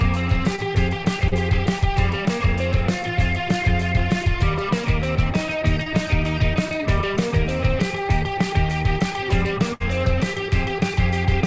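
Short concealed packet loss occurs at 0.56 to 0.60 s, 1.28 to 1.34 s and 5.84 to 5.88 s, filling about 20 ms, 38 ms and 20 ms. Each time, audio failed to arrive and the receiver patched the hole by extending the preceding sound, heard as a brief smear or wobble. A spectrogram shows a short stretch of smoothed, repeated texture.

A burst of packet loss runs from 9.74 to 9.82 s, with about 60 ms missing. The receiver stretched the last sound across the gap while turning it down, producing a held, fading buzz or hiss before the audio resumes further on. In the waveform it appears as a repeating, decaying segment. The spectrogram shows flat, smeared bands with no onsets, set against a band limit at 8 kHz that fits a G.722 call path.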